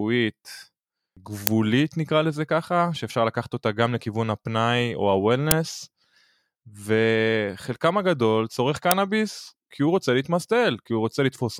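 In this speech clip, an uninitialised buffer reached the output three times: blocks were played before any audio had been written into them, so whatever stale memory they held was sent out as samples. Each event is heard as a brief, loud crack, at 1.47 s and 8.91 s lasting about 2.9 ms, which fits a 128-sample buffer, and at 5.51 s lasting about 5.8 ms, consistent with a 256-sample buffer.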